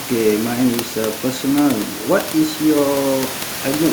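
The speech comes through with no technical faults, and the room's background noise sits about 13 dB below it as part of the original recording.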